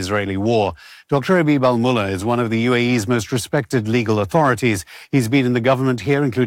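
No technical faults are audible anywhere in the audio.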